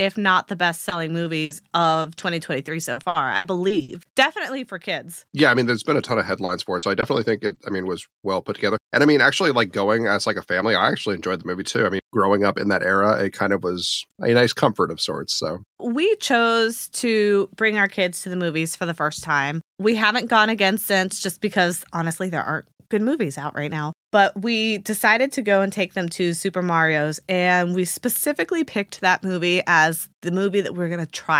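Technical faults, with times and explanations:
0.89–3.91 s and 6.11–7.59 s, repeated packet loss (robotic sound): Right after "not the best", nine short dropouts, the longest about 80 ms, get patched by stretching the last bit of sound. Together they cover about 380 ms, roughly 13% of that stretch, so it turns choppy. After "mean there's been a", the same thing happens again with five holes of up to 40 ms, totalling about 160 ms, before "I mean was well".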